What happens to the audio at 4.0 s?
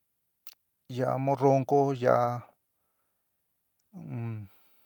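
A brief rough, noisier patch at 4.03 s: a lost packet rebuilt from error correction, with the decoder playing the next packet's low-bitrate copy, which fits a single lost 20 ms frame.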